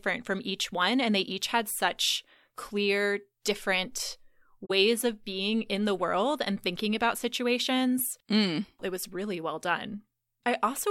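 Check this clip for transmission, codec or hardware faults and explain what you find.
One codec fault is present. From 4.65 to 4.71 s there is a corrupt frame concealed: damaged AAC data was detected and the decoder covered the gap itself, over a stretch about 60 ms long, which fits two damaged frames. A spectrogram shows a brief faded or smeared band.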